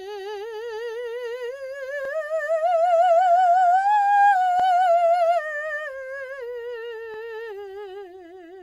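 At 2.05, 4.60 and 7.14 s the music stutters: overlapping chunks, each roughly 2.5 s piece starting 44 ms early, so that sliver replays at every join.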